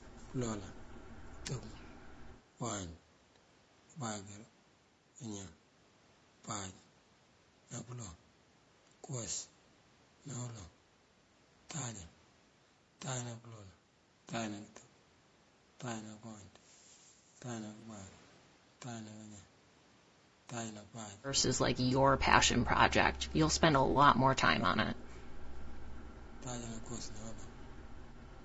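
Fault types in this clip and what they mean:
Low-delay AAC compression: speech sounds rough and grainy throughout, with noise between harmonics, likely from AAC-ELD's short frames at a low bitrate around 32 kbps.
AAC frame loss with concealment: brief smeared, noisy patches at 17.79, 21.89 and 23.91 s, where lost 20 to 40 ms frames were rebuilt from the previous spectrum.
Speech suppressed in double talk: speech dips in short pieces, by up to about 25 dB, between 22.24 and 26.45 s, likely an echo canceller turning down simultaneous talk.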